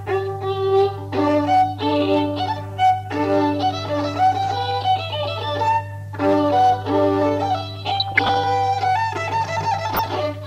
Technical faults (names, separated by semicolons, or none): hard clipping; DAB burbling